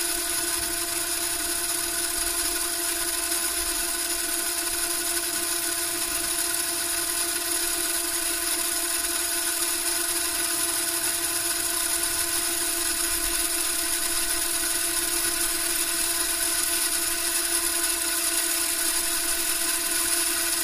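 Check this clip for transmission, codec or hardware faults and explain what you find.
No transmission, codec or hardware faults turn up anywhere in the audio, with nothing that departs from how the recorded sounds themselves behave.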